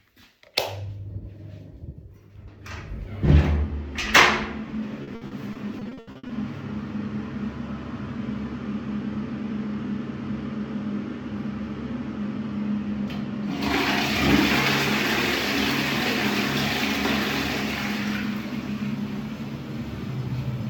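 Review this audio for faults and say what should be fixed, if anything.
Repeated packet loss (robotic sound) occurs between 5.03 and 6.31 s. Packets arrived late or not at all again and again, and the receiver filled each hole by extending the last sound it had. About a dozen holes, the longest 80 ms, add up to 460 ms missing, so roughly a third of that stretch is patched-over sound. The result is choppy audio with fragments dropped. To prevent it, fix the network path's loss and jitter and give the receiver a deeper adaptive jitter buffer and forward error correction.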